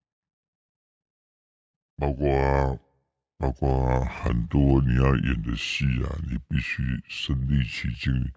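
Wrong sample rate throughout this speech clip: everything runs at about 0.73 times normal speed and sits about 5.5 semitones low, so the voice sounds deep and dragged. Speed and pitch drop together, which fits audio recorded at 22 kHz but played back at 16 kHz without conversion.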